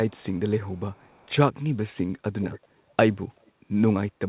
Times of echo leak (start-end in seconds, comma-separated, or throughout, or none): 0.10-0.39, 0.75-1.31, 2.41-2.60, 3.43-3.51